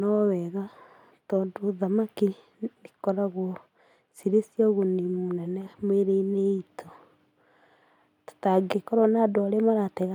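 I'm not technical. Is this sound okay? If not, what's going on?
Yes, this sound is okay, and there's nothing going on that needs fixing.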